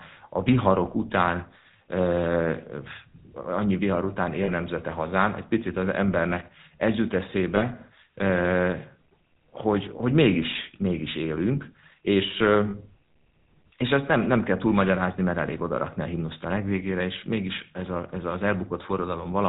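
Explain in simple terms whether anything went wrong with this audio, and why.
The whole clip has gone through the GSM full-rate codec, the old mobile-phone voice coder, and you can plainly hear it. It rebuilds the voice from a simple model of the throat and mouth, fed by a coarse pulse pattern, so the speech comes out buzzy and gravelly. Everything above 4 kHz is cut off, which makes the voice sound boxed-in and dull, like an old phone call.

There are also three short spots of lost GSM frames. When a chunk of data doesn't arrive, the decoder repeats the last good sound, so you get a brief metallic ring instead of a gap. The first comes at 4.44 to 4.51 s, about 40 ms long, right after "annyi vihar után" and before "nemzete hazán egy picit". The second, around 20 ms, is at 7.56 to 7.64 s, just after "az embernek ez jut". The third, about 40 ms, is at 12.7 to 12.75 s.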